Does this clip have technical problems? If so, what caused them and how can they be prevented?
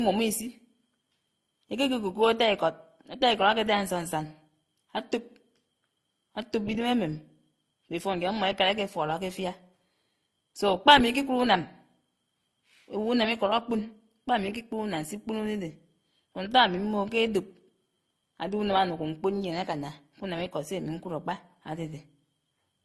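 Yes. Throughout, the speech has two different kinds of compression smearing and swirl layered together, with nothing above 19.5 kHz. This is likely transcoding between lossy codecs, which fits an MP3 encode near 48 kbit/s re-encoded to Opus near 24 kbit/s. To prevent it, encode once from the original uncompressed source rather than re-encoding compressed audio.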